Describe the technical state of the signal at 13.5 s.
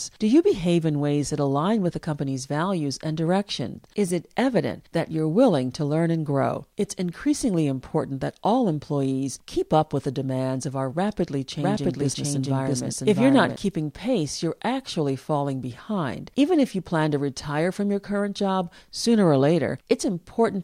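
At 13.5 s the speech carries a doubled audio track, running from 11.58 to 13.56 s: a second full-band copy at roughly equal level trails about 0.7 s behind, likely from a slower capture path. Unlike an echo, it has no decay or room colouring and ends abruptly.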